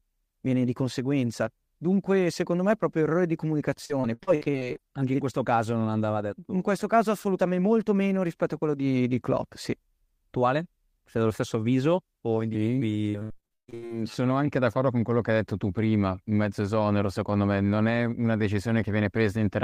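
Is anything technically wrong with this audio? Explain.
Yes. Repeated packet loss (robotic sound) occurs at 3.85–4.80 s, after "è proprio errore di", and at 13.10–13.92 s, before "sono anche d'accordo con". Rapid successive dropouts are patched by stretching prior sound, making the speech choppy and robotic. The second burst is heavier, with about 60% of the stretch concealed and gaps up to 138 ms.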